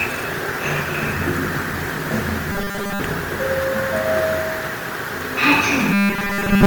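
From start to finish the sound has a swirly, hollow, smeared quality, with blurred attacks and a watery texture. This is generation loss, likely from the audio passing through a lossy Opus encoder a few times. The coloration points to a rate around 48 kbit/s. Each decode and re-encode quantises on a shifted frame grid, so the noise and spectral gaps accumulate.

From 2.52 to 3.00 s, and again from 5.93 s to the end, the sound turns into a rigid, metallic buzz at 200 Hz that only loosely tracks the underlying audio. This is robotic sound from repeated short buffers. The likely cause is audio arriving too late, with the playback filling each gap by looping about 5 ms of the most recent material. That fixed 200 Hz rate comes from the loop length, and most of the real signal in those spans is skipped.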